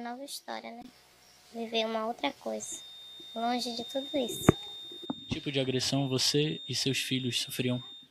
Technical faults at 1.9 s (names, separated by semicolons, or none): none